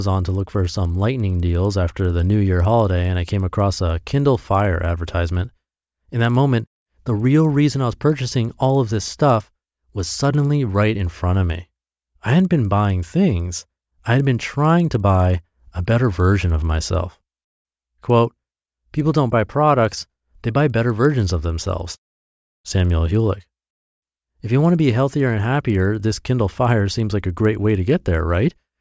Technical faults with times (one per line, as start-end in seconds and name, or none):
0.00-28.81 resampler restarted on every block